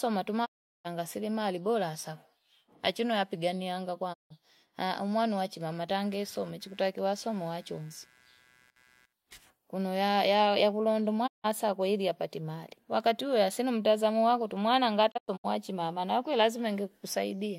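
Speech with four digital broadcast dropouts: the sound fades out over about 20 ms and goes silent from 0.44 to 0.87 s, 4.12 to 4.32 s and 11.26 to 11.46 s, and breaks into several short holes between 15.10 and 15.46 s, the longest about 96 ms. On a waveform these are flat gaps, and on a spectrogram they are empty vertical bands. The gap lengths fit whole frames of about 32 ms that failed and were muted. From 6.01 to 9.13 s a faint buzz of computer activity noise, about 35 dB below the speech, pulses at roughly 150 Hz regardless of the speech. It shows as a harmonic comb of thin horizontal lines across that stretch, and it comes from processor or peripheral load disturbing the audio ground.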